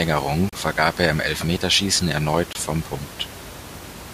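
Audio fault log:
0.49–0.53 s and 2.53–2.55 s, gap between stream segments: hard-edged silent holes of about 34 ms, just before "vergab er im", and 24 ms, spaced 2 s apart where mistimed segment joins leave silence.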